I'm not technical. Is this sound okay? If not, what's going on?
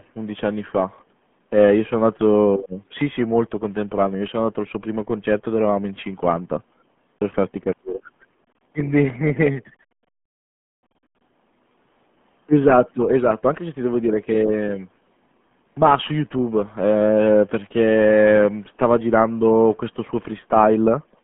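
No. For the whole clip, the speech has gone through the RealAudio 14.4 codec, an old dial-up-era format that throws away most of the detail to fit a tiny data stream. Nothing above 3.8 kHz survives, so it sounds muffled, gargly and heavily damaged.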